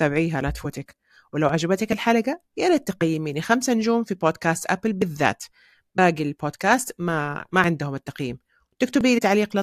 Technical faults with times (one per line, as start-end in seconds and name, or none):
0.64 compressed frames skipped
3.01 compressed frames skipped
5.97 compressed frames skipped
9.17 compressed frames skipped